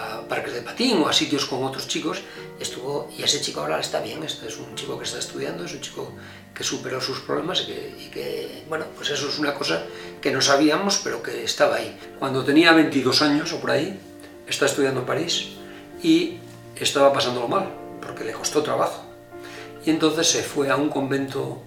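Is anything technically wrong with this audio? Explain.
Yes. There are three drift correction steps. From 2.17 to 4.19 s and from 8.20 to 9.17 s, the audio runs about 6.3% fast and rises 106 cents. From 12.92 to 13.43 s it runs 6.3% slow and drops 113 cents. Each time, speed and pitch move together and then snap back. That is roughly a semitone of detuning. The cause is likely software matching two clocks by changing the playback rate in one step to refill or drain its buffer.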